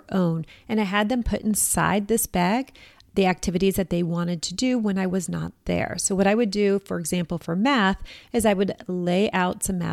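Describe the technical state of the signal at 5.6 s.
At 5.6 s the speech signal is intact, with no audible dropout, distortion, clipping, or other fault at that moment.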